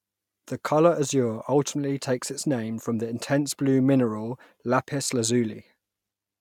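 Nothing stood out as a technical problem anywhere in the speech on listening.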